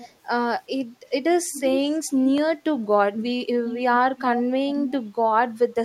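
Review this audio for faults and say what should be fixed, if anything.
Echo leak appears at 0.0–0.14 s, 1.52–1.84 s, 3.19–3.24 s, 3.65–3.8 s, 4.18–4.4 s and 4.87–4.93 s. A copy of the speech returns about 0.38 s late. It is roughly 20 dB down at the start, around 10 dB down in the middle events and about 15 dB down at the end. It likely comes from a far-end loudspeaker whose echo canceller let part of the microphone pickup through. Unlike room reverberation, which smears continuously, these are brief, discrete repeats at one fixed lag. Preventing it means retuning or upgrading the far end's echo cancellation, or having that side use a headset instead of a loudspeaker.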